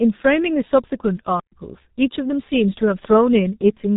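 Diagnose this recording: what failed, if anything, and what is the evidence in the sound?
Codec stage. The speech is muffled and hoarse from start to finish, with nothing above 3.8 kHz and smeared consonants. This is heavy G.723.1 codec damage. Its coarse 30 ms frames and slow voice model fit a rate near 6.3 kbit/s.

Playback stage. The audio cuts to silence from 1.40 to 1.52 s, a gap of about 0.12 s. It then resumes mid-flow. That is a playback stall, likely from the player running short of buffered data or its thread being blocked.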